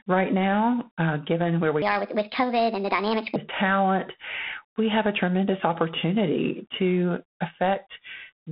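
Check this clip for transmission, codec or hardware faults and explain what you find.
Two faults are audible.

Throughout, G.726 ADPCM coding adds a harsh, level-following rasp that points to 24 kbit/s. The spectrogram shows nothing above 3.4 kHz and a grainy noise floor under the speech.

From 1.82 to 3.36 s, right after "now uh given where", a section at the wrong speed runs 1.38 times fast and about five semitones high, likely from a clock mismatch. The harmonics on the spectrogram shift upward and the waveform looks compressed in time.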